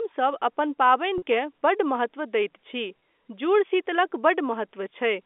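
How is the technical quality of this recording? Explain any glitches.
There are two brief glitches in this speech, which is carried over G.711 telephone coding with only faint quantisation noise. Both are packet loss with pitch repetition, at 1.18 to 1.22 s and 3.00 to 3.02 s. About 40 ms, then 20 ms, went missing, which fits two lost 20 ms packets and then one. The receiver bridged each gap by repeating the last pitch period. Each sounds like a short, slightly held buzz.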